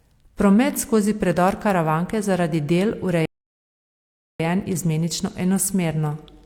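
At 3.25 s, right after "je zaradi del", a rebuffering stall cuts the speech to silence until 4.40 s, then resumes exactly where it stopped, adding about 1.1 s.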